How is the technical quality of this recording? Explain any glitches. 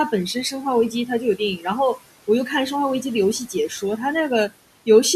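The recording has two related problems, both from noise suppression, sitting over room noise about 18 dB below the speech.

Noise suppressor artifacts run through the whole clip. The background drops away between phrases and creeps back in under the speech. A noise suppressor is estimating the steady room noise and pulling down every frequency band it judges to be noise, frame by frame, by about 17 dB.

Speech cut by the noise suppressor occurs at 1.57 to 1.66 s and again at 3.49 to 3.99 s. In each spot the speech briefly turns faint and swallowed, dipping by about 9 dB in the first instance and about 11 dB in the second, with roughly a tenth of a second affected each time. Here the suppressor mistook quiet speech energy for background noise and turned it down along with the room sound.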